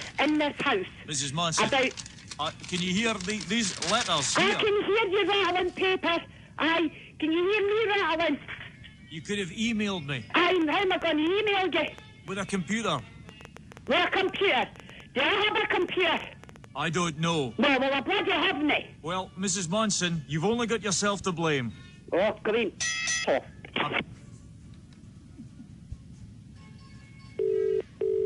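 There's a train of clicks running from about 10.51 s to 16.65 s. It's a burst of near-identical ticks at roughly 8.7 per second, spaced unevenly, somewhere around fifty in all, and they poke out a few dB above the sound itself, so they tick over it and into the pauses too. Same-shaped pulses arriving on an uneven pace like that are most likely interference from nearby gear or a faulty connection or power supply for that stretch.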